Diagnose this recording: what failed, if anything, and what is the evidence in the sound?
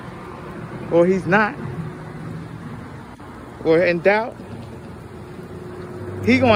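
Nothing failed; no fault is audible at any stage.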